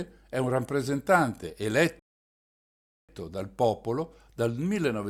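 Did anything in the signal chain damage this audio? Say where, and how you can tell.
Yes, a rebuffering stall at the playback end. The speech cuts to dead silence at 1.99 s and picks up again at 3.09 s exactly where it left off, with no words skipped or repeated. That seamless resume is the tell: the player drained its downloaded buffer, sat idle for about 1.09 s waiting for more data to arrive, then carried on. Nothing was dropped, but that gap is extra time that wasn't in the original.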